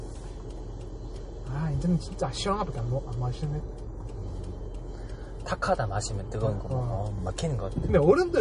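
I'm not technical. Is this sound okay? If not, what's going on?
No. From start to finish the sound has a watery, swirly quality, and the top end is missing entirely, with nothing above 10.6 kHz. This is likely MP3 compression squeezed too hard, which throws away the treble and lets faint details flicker in and out.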